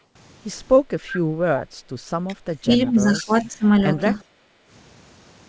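At 1.07 to 1.21 s, the far end's echo canceller likely failed to remove everything its microphone picked up from the loudspeaker, producing an echo leak. A faint delayed copy of the speech slips through, lagging about 363 ms and sitting roughly 15 dB below the main voice.

From 1.66 to 1.89 s, the background is gated by the echo canceller. It clamped the microphone hard while its loudspeaker was playing, so the room sound drops by about 9 dB, then returns once the canceller releases.

Three stretches of speech suppressed in double talk follow, at 2.27 to 2.34 s, 2.50 to 3.68 s and 3.95 to 4.05 s. With both sides talking at once, the canceller likely could not separate the local talker from the loudspeaker echo and turned both down. The speech first dips by roughly 10 dB. It then sinks by as much as 20 dB for about a second. Finally it dips only slightly.

At 4.33 to 4.69 s the echo canceller gates the background again. 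The room sound falls by about 9 dB for around 0.4 s before recovering. Throughout the clip the top end stops at 8 kHz, which fits the G.722 call path.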